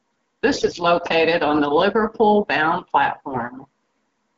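AMR bit errors, around 0.53 to 0.80 s and again 3.27 to 3.44 s: roughly 10% and then 7% of the less protected bits flipped, misplacing excitation pulses, so the wideband speech turns hoarse, scratchy and gargly.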